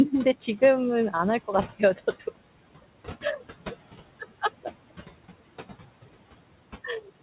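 Throughout the speech, noise suppressor artifacts pump the background about 17 dB down between phrases and let it back under them. A spectrogram shows the noise floor appearing and vanishing with each phrase, all within the 4 kHz band limit of the call path.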